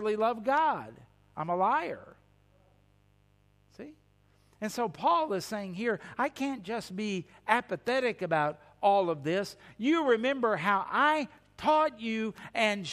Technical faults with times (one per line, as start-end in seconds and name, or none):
0.00-12.93 mains buzz